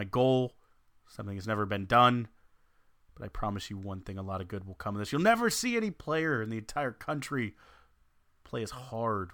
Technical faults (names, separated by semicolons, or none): none